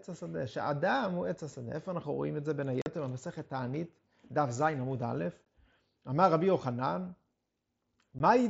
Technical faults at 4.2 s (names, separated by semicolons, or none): none